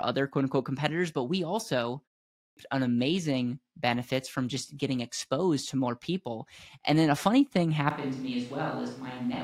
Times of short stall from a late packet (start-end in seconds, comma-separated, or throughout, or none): none